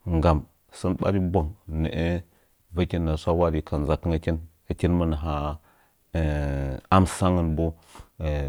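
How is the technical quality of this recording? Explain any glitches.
The technical quality of this recording holds up, with no glitches to explain.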